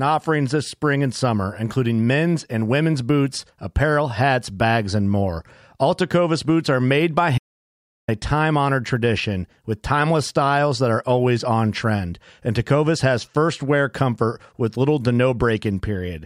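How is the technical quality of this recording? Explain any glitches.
The recording has one clear glitch, an audio dropout to silence, from 7.38 to 8.08 s. Just after "boots are made by", the speech cuts off abruptly and returns mid-flow at "a time honored tradition", leaving about 0.7 s missing. The likely cause is a brief loss of the input signal while the recorder kept writing silence. The gap is completely dead, with no room tone, which distinguishes it from a natural pause or a quiet stretch.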